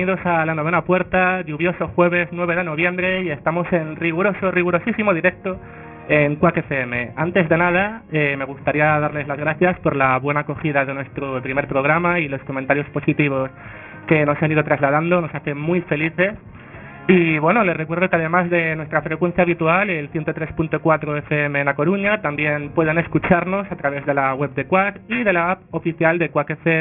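Aliasing runs throughout. The sound points to resampling down to about 6 kHz without filtering, so everything above 3 kHz folds back as unrelated, gritty tones not far below the signal. Unlike plain low-pass dullness, the band stays harsh and metallic right up to its edge.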